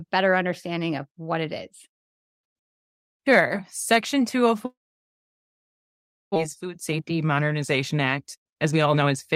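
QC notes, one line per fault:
4.65–6.38 s, long network dropout: The stream most likely stopped delivering packets for this stretch, and about 1.0 s of audio was never played. The receiver briefly carried the last sound forward as a fading buzz, then fell to silence for about 1.6 s of the 1.7 s gap. When sound resumes it has jumped ahead past the lost material, and the playout delay has shifted by roughly 0.7 s.
7.94–9.36 s, jitter buffer speed-up: The jitter buffer had built up more audio than its target, so the receiver trimmed it by repeatedly cutting out short pieces one or a few pitch periods long. Around 0.3 s was removed in total. The speech plays at 120% speed through to the end with its pitch unchanged, so it sounds noticeably rushed rather than higher.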